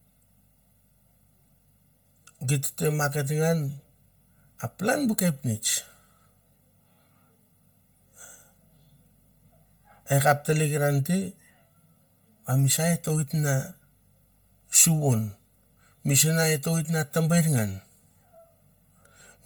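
From start to finish there's channel delay (comb filtering): one side runs around a millisecond and a half late, so the mono sum notches out near 300 Hz and up, leaving the speech hollow. Throughout, the speech also has a heavy breathy, grainy edge with noise-filled highs topping out at 20.3 kHz, likely Bluetooth LC3 compression at a low rate, consistent with 10 ms frames and roughly 32 kbps.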